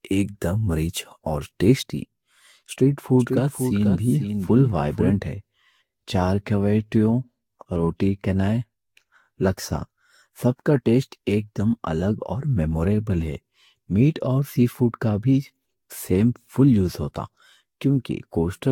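Throughout the speech there is a swirly, hollow, smeared quality, with consonant attacks blurred and nothing above 18.9 kHz. That points to generation loss: the audio was likely decoded and re-encoded with a lossy codec around five times, which fits a Vorbis chain near 67 to 69 kbit/s. Each pass quantised again on a shifted frame grid, so the noise and the spectral gaps built up beyond what that bitrate alone would produce.

From 3.19 s to 5.11 s the speech is heard twice. A second full-band copy, about 5 dB quieter, trails the original by roughly half a second. It has no reverb tail or room colouring, and it cuts in and out abruptly at those edges. This is a doubled audio track, likely caused by the same signal arriving again through a slower path or by an edit that left two out-of-step copies overlapping.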